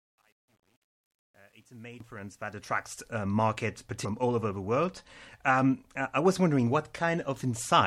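The fade-in at the start of this speech clip runs through a gain stage that keeps too few bits and adds no dither, which fits about a 10-bit word length. This is truncation distortion on a fade. From 0.0 to 3.13 s, while the level rises smoothly toward full just before "uh market", the low end turns into coarse square steps. The sound is gritty, worst from 0.0 to 2.21 s.

Damaged data in a compressed stream appears twice, at 2.00 s and at 4.05 s. The second falls between "uh market" and "all over the world". At each point some bytes of the compressed stream are wrong. The decoder misreads the affected frames, loses sync and has to find the next valid frame header. Each event is heard as a short chirp or blip that cuts across the sound.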